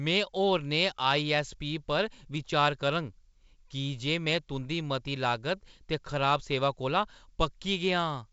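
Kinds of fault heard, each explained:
Nothing to flag in this one: the speech comes over G.722 wideband telephone coding at 64 kbit/s, with the top of the audio stopping at about 7.7 kHz as that path allows.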